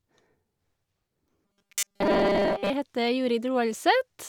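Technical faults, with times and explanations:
1.45 to 2.70 s, robotic sound from repeated short buffers: the speech hardens into a rigid, metallic buzz fixed at 200 Hz, still tracing the rough shape of the words. This is likely caused by audio arriving too seldom, so the playback fills the gaps by looping the last 5 ms, which matches the 200 Hz tone. Most of the real audio in this stretch is skipped in favour of those repeats.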